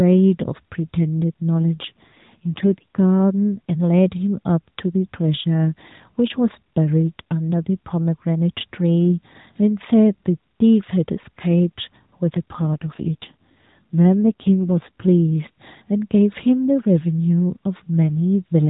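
From 1.82 to 3.00 s, and again from 12.26 to 15.35 s, the speech shows an AMR rate drop. The mobile codec falls back to a lower mode, consistent with a step from 12.2 to 5.9 kbps, and spends the freed bits on protection. The voice turns rougher and buzzier while the 4 kHz narrowband ceiling stays put and nothing drops out. That steady band with no gap sets it apart from packet loss or a bandwidth switch.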